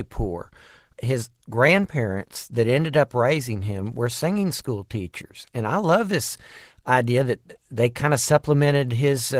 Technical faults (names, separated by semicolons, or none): Opus voice compression